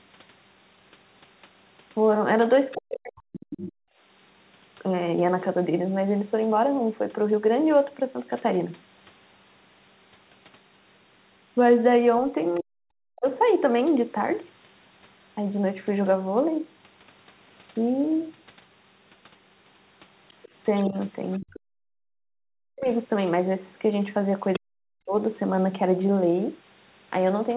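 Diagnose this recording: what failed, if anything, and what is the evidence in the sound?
The other side's voice leaking through sits faintly under the talker at 2.71 to 3.44 s, 20.43 to 21.6 s and 24.53 to 24.59 s. It is roughly 25 dB down, nearer 20 dB at 24.5 s. The stage is call processing. The likely cause is an echo canceller leaving loudspeaker sound in the microphone signal.

Speech suppressed in double talk appears at 2.75 to 3.9 s, 12.6 to 13.28 s, 20.86 to 22.92 s and 24.58 to 25.14 s. The talker's level drops by up to around 40 dB. The likely mechanism is a canceller unable to separate near speech from echo while both sides talk, so it attenuates everything.

The background gated by the echo canceller is heard at 21.74 to 21.87 s. The room sound falls by about 40 dB for roughly 150 ms, then returns. This is call processing again. The suppressor clamps the microphone while the loudspeaker plays and releases it afterwards.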